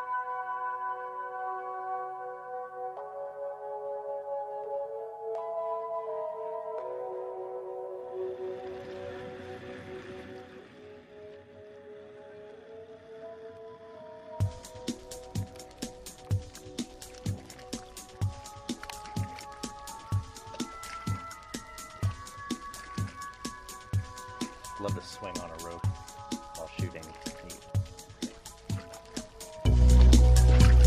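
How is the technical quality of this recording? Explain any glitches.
The recording has two stretches of zipper noise, each appearing where the level is moved in steps. Zipper noise occurs at 10.12 to 11.15 s, where the level drops by roughly 10 dB in 1 dB steps, and at 29.54 to 30.0 s, where it rises by about 10 dB in 2 dB steps. In both, the gain jumps about ten times a second with no smoothing between steps. Each jump puts a tiny click into the waveform, so a ticking, zipping texture rides on the sound while the level moves.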